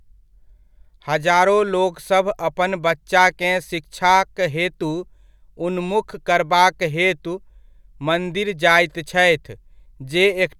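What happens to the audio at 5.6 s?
Nothing goes wrong at 5.6 s; the speech carries on intact through that moment, with no dropout, click, distortion or other fault to be heard there.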